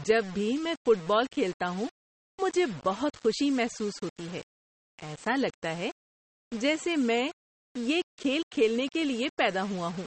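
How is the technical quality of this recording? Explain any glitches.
The technical quality is poor: two faults run through the whole speech clip, one adding grit and one adding codec smear.

Low bit depth without dither is heard from start to finish. The signal likely sits on very few amplitude steps, which fits about 6-bit rounding, with no dither to break up the error. Because the rounding error tracks the waveform, it rises and falls with the speech, leaving a grainy, gritty distortion roughly 20 dB below the signal. Quiet syllables and decays turn rough and buzzy.

MP3 compression is also present throughout, and its damage is plainly audible. Nothing sits above about 8.4 kHz, so the top of the spectrum is sliced off and sibilants sound dull and lisped. The heavy data reduction points to a low bitrate of around 32 kbps, where the encoder starves weaker frequency components and lets them flicker between frames. 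That gives the speech a watery, swirling texture with blurred consonant onsets.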